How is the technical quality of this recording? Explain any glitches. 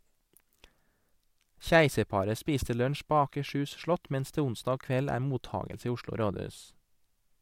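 The technical quality of this recording shows no glitches to explain.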